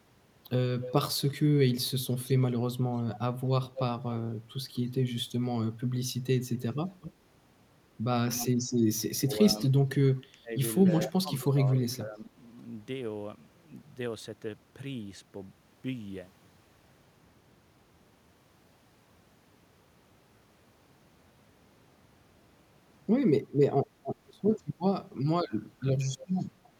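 A faint delayed copy of the speech trails the talker at 0.82–1.21 s, 2.24–4.16 s, 6.54–7.13 s and 8.31–8.47 s. This is echo leak. The copy lags by about a quarter of a second, drifting from 234 to 243 ms. It sits roughly 15 to 20 dB under the direct speech. The likely cause is a far-end loudspeaker whose echo canceller let part of the pickup through and sent it back.

From 9.16 to 12.35 s there is speech suppressed in double talk. Both sides are speaking. The talker's level dips in pieces, at worst by around 20 dB. The cuts add up to about a second. The likely cause is an echo canceller that could not tell the talker from the returning echo, so it turned both down. Echo leak also shows up inside this stretch. A tiny scrap appears at 9.58–9.62 s, very faint at about 30 dB down. A longer one runs from 10.86 to 11.96 s, about 15 dB down, with a 247 ms lag.

Echo leak returns at 26.18–26.68 s. 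It is about 20 dB below the speech. The delay has grown to 265 ms.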